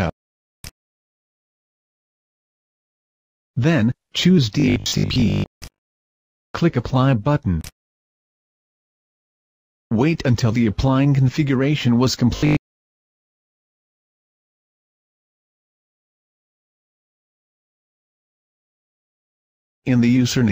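From 4.60 to 6.44 s and 12.37 to 13.69 s, robotic sound from repeated short buffers: a rigid 50 Hz buzz, likely from 20 ms buffers replayed over most, then about half, of the audio.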